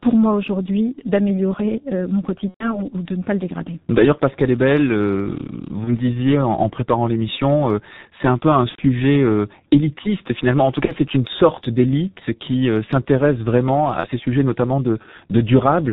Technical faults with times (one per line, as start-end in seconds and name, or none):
0.00-15.93 G.723.1 codec
2.48-2.87 VoIP packet loss concealed by the speech codec
8.69-8.82 VoIP packet loss concealed by the speech codec
10.85-10.92 VoIP packet loss concealed by the speech codec
14.00-14.08 VoIP packet loss concealed by the speech codec